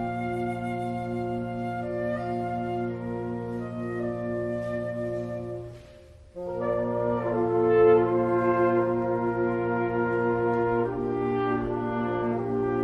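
Nothing in the recording stood out as a technical problem on listening.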